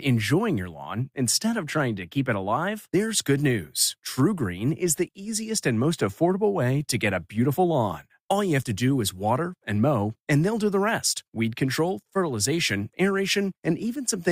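No technical faults can be heard at any point in the speech.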